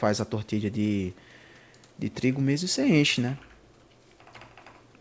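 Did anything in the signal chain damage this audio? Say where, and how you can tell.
No, nothing in the signal chain stood out as damaging this speech on listening; the top end stops at about 8 kHz, as expected from the call's microphone processing and the G.722 call path.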